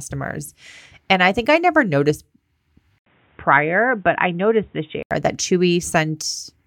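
The recording input was likely switched mid-take from the original microphone to a poorer device, turning this speech clip narrow and boxy from 2.98 s to 5.11 s. An 80 ms gap of silence marks the switch. In that span nothing reaches above 3.8 kHz, and a faint new background noise sits well below the speech. Loudness stays about the same, so the change is heard as dull tone, and full bandwidth returns at 5.11 s.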